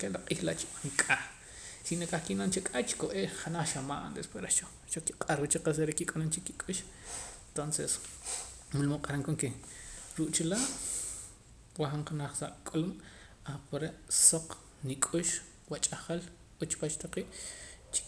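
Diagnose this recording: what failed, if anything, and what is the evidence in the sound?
Nothing here points to a failure at any stage, and the speech comes through without any fault turning up.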